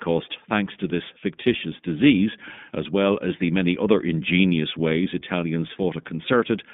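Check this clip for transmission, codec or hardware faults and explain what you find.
The speech carries an iLBC codec fault from start to finish: this narrowband coder handles each 20 ms frame independently, passing only about 150 Hz to 3.6 kHz, so speech sounds plainly rough and synthetic, consistent with 15.2 kbps. A spectrogram shows nothing above 3.6 kHz.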